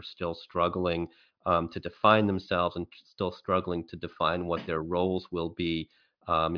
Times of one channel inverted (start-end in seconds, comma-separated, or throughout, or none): none